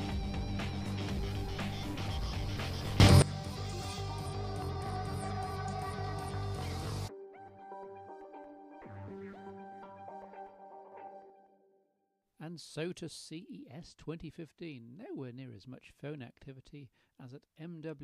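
There are two sudden gain jumps in this audio: the level leaps up by about 18 dB from 3.0 to 3.22 s, then by about 6 dB from 10.92 to 11.3 s, with the background noise jumping right along with it. That's likely a digital gain step applied without any ramp.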